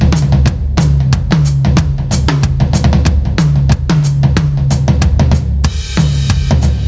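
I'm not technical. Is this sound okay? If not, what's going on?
No. The recording level was likely set far too high, so an automatic leveller keeps pulling the volume down on every loud moment of this music. That is gain pumping: throughout, loud and soft parts end up closer in level, and everything sounds squashed together.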